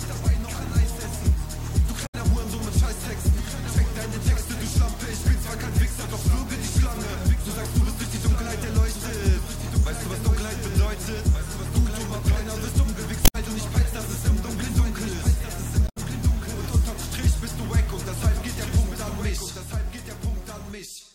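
A second copy of the audio, most likely picked up again through a slower capture path or left out of step by an edit, runs alongside the original for the whole clip. This doubled audio track trails by about one and a half seconds and sits roughly 5 dB below the original. It is full-band and dry, with no decay or room colour, so every event is heard twice: once clearly, then again as a flat, quieter repeat.

Three stretches of damaged data in the compressed stream then break in, from 2.05 to 2.15 s, from 13.24 to 13.35 s, and from 15.85 to 15.97 s. At each point the decoder hits corrupted frames it cannot read properly, loses sync, and has to hunt for the next valid frame header. Each one lasts about a tenth of a second and is heard as a brief chirp, squawk, click or short hole.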